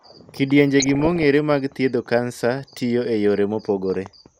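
A speech recording that has likely passed through MP2 coding at a low bitrate, with damage that fits roughly 80 kbps: too few bits for its 32 sub-bands means upper bands switch off and flicker, leaving the voice dull, gurgly and grainy throughout. DAB burbling follows from 0.80 to 1.23 s, where bit errors of somewhat under one percent slip past error correction into the MP2 data, putting short blips of noise into single sub-bands.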